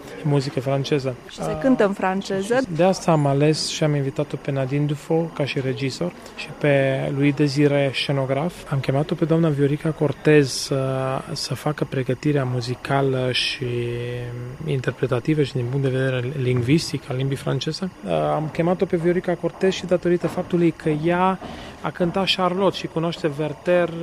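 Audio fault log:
Throughout, timecode bleed: linear timecode from an adjacent line leaks in about 30 dB below the sound. It is a square wave flipping between pitches near 1 and 2 kHz at 24 frames per second, a rhythmic chirping warble unlike a steady single-pitch whistle or tone.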